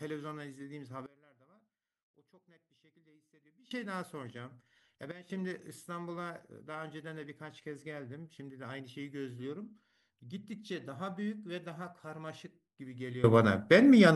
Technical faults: sudden gain jump

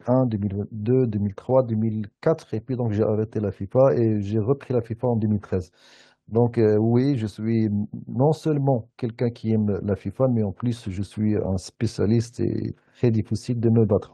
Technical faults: none

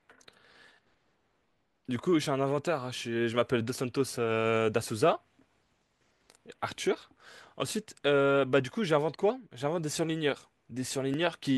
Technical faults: clock drift buffer slips

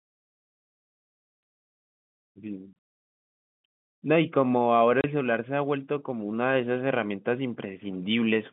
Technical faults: packet loss filled with silence

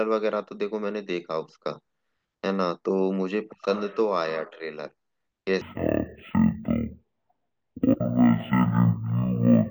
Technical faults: stereo read as mono

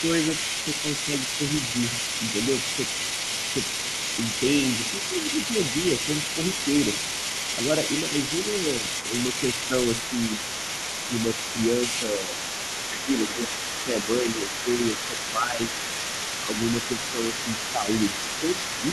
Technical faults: other side's voice leaking through; speech suppressed in double talk

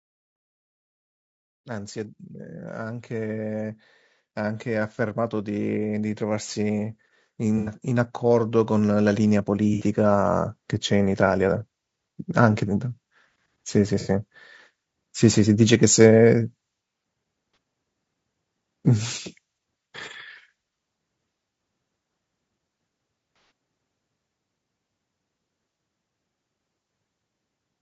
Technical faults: low-delay AAC compression; automatic gain rising; AAC frame loss with concealment

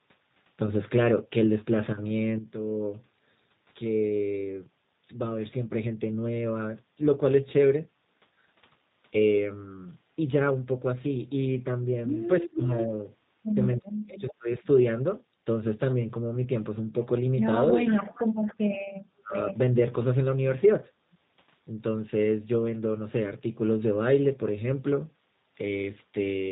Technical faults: G.729 codec; echo leak

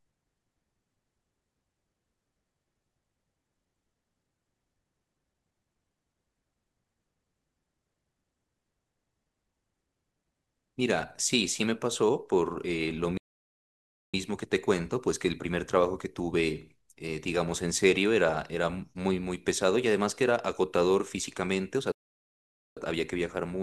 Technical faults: playback stall

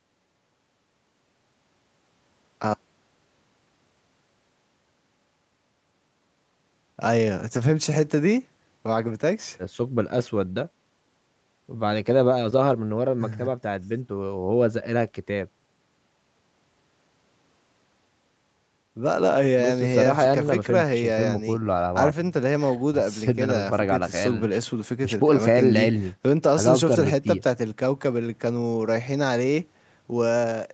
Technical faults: none

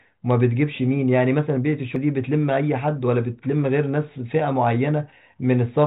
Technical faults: CD skip

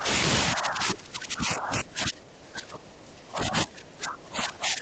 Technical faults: speech suppressed in double talk

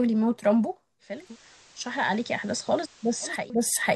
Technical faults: digital radio blending to analogue

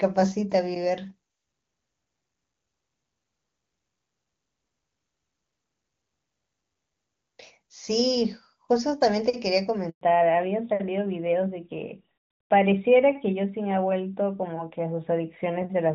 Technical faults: handover gap; fallback to narrowband

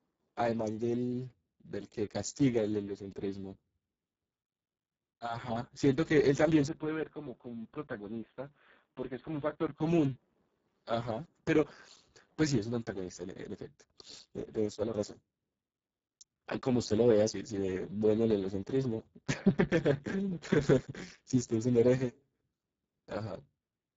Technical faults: Speex codec; input switched to a poorer device

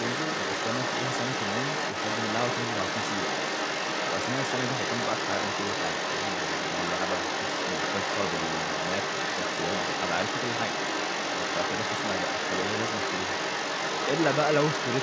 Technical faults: other side's voice leaking through

